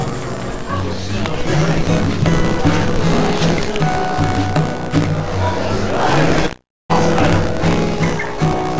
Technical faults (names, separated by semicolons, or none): buffer tearing; long network dropout